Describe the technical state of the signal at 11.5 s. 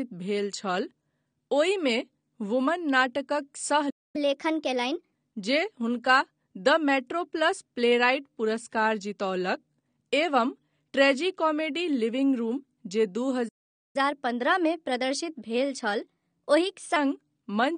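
At 11.5 s the speech carries plainly audible codec damage, present from start to finish, with AAC compression as the likely cause, pointing to AAC-LC at about 32 kbps. At that rate the encoder quantises each frame's frequency lines coarsely, pulls the top of the band down, and either leaves spectral gaps or fills them with stand-in noise. The result sounds dull and smeared, with a warbling, fizzy edge on sibilants. A simple low-pass filter would sound dull but stay clean, without this shifting texture.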